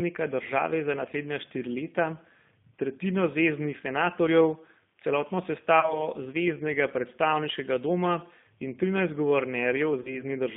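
Speech passed through the G.729 codec at 8 kbit/s, so its spectrogram shows a hard band of about 150 Hz to 3.5 kHz, and the voice sounds plainly rough and synthetic. VoIP packet loss concealed by the speech codec appears twice: 30 ms of audio drops out, consistent with a single lost packet. The first dropout falls after "tretjino zveznih senatorjev celotno" and before "zveznega predstavniškega doma in", from 5.80 to 6.08 s. The second runs from 10.02 to 10.23 s. In each, the decoder stretches the last pitch and filter into a buzzy tone or coloured noise that fades. This shows as repeated smeared harmonics and a shrinking waveform envelope, which stay weak for a while before recovering.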